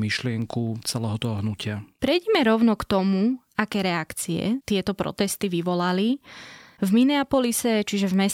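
From 0.42 s to 8.14 s, word clock ticks recur about every half second, around fifteen in all: sharp clicks of uneven strength. An unlocked receiving clock, drifting by something near 50 ppm, slips one sample at each pass, showing as thin full-band vertical lines on a spectrogram and tiny waveform discontinuities.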